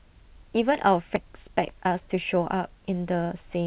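At 1.16 to 1.18 s the speech has a skip ahead: playback jumps forward with no fill at all, and something like 0.4 s of audio is gone. The two sides are butted almost directly together, so the missing section reads as an abrupt cut rather than a gap. That pattern fits a jitter buffer discarding a backlog of queued audio, or packets lost in transit, bringing the delay down by roughly the same amount in one step.

Right after, from 1.26 to 2.16 s, a jitter buffer speed-up runs the speech at 106% of normal rate with no change in pitch. The receiver is trimming short pitch-period-length pieces repeatedly to drain excess buffered delay, removing on the order of 50 ms in total. The result sounds slightly hurried over that stretch. Throughout, nothing is present above 4 kHz, as expected for the G.711 A-law call path.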